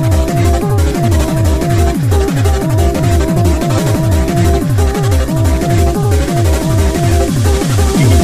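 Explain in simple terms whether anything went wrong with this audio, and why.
Nothing went wrong with this audio that a listener could point to. It holds together as expected the whole way, with no moment that stands out as a technical problem.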